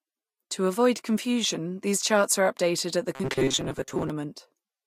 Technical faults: robotic sound from repeated short buffers

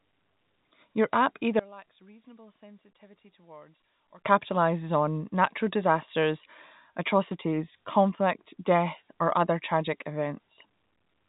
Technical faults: one channel inverted

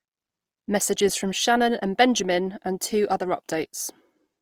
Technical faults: Opus compression

